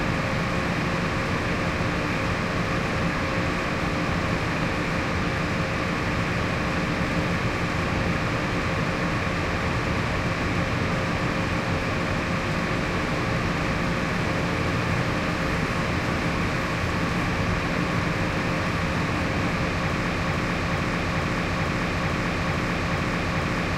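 From 20.13 s to the end, a 0.44 s fragment repeats eight times back to back, a broken-record loop, likely from a stalled player or stream resending its last buffer.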